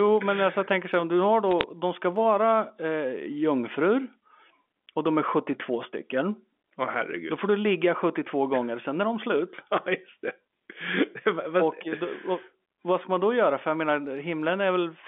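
A brief burst of sharp ticks and crackle sits on top of the speech from about 1.51 to 1.63 s, while the speech underneath carries on unchanged. These are bit errors on a digital phone line: the sound points to a G.711 mu-law telephone path, already limited to roughly 200 Hz to 3.5 kHz, where a small fraction of a percent of bits were flipped. Each flipped bit corrupts a single sample, and hits on the sign or upper bits jump the waveform enough to click.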